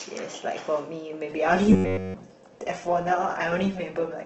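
At 1.29 s the stream switches to a lower bitrate and stays there to the end. Codec artefacts rise around the voice. The change happens abruptly, with no gap or dropout, as an adaptive stream does when it falls back to a cheaper encoding after the connection slows. The loss of detail fits a drop from about 64 kbit/s Opus to about 12 kbit/s.

From 1.73 s to 2.15 s the speech turns into a rigid, metallic buzz at about 94 Hz. This is robotic sound from repeated short buffers. Essentially the whole stretch is affected, though the buzz still loosely tracks the shape of the speech. The likely cause is that fresh audio arrived too rarely, so the player kept looping the last fragment, about 10.7 ms long, and the real audio in between was skipped. That loop rate sets the fixed pitch.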